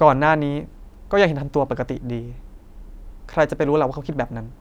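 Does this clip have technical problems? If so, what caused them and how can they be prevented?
No, no technical problems here.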